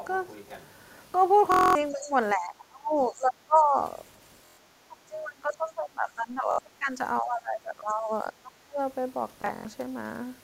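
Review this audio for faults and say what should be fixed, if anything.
Bluetooth stutter occurs at 1.52–1.75 s, 4.46–4.58 s, 6.51–6.59 s and 9.42–9.65 s, losing about 232, 116, 70 and 139 ms. Late or lost packets made the receiver replay its last slice, giving a buzzing repeat rather than a silent gap. Shortening the link distance or clearing radio interference would prevent it.

Speech suppressed in double talk dips the speech at 1.91–2.14 s, 2.34–3.78 s, 4.76–6.99 s and 7.21–8.79 s, by roughly 15 to 30 dB. The likely cause is an echo canceller ducking everything while both sides talked. Unlike the stutter, the level sinks and nothing repeats. A full-duplex-capable echo canceller would prevent it.

The other side's voice leaks through at 2.02–2.10 s, roughly 20 dB below the speech. It is likely loudspeaker echo that the canceller did not fully remove. It is a faint second voice added on top, where suppression takes level away. 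Better echo cancellation or a headset would prevent it.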